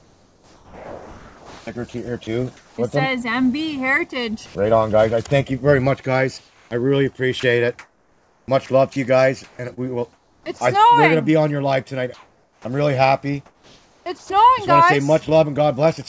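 From 0.00 to 2.78 s the sound is chopped, likely by the voice detector. About 1.9 s in total is swapped for comfort noise.

At 4.46 to 4.55 s the sound drops for 90 ms under steady noise. The voice detector likely judged it background and stopped sending.

At 6.38 to 6.71 s comfort noise replaces the background. It is likely synthetic fill during a transmission pause. It sounds flat and about 2 dB quieter.

From 7.40 to 10.61 s the chopping returns, with about 1.3 s filled by comfort noise.

At 12.14 to 12.65 s featureless comfort noise again stands in for the background, this time about 2 dB louder.

From 13.46 to 14.30 s the sound is chopped once more, with 0.72 s replaced.

Throughout, nothing is heard above 8 kHz. This fits a G.722 call codec at 64 kbps.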